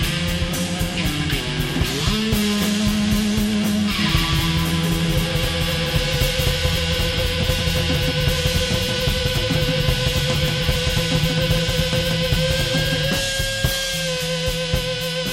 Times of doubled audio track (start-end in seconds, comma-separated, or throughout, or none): 3.99-13.11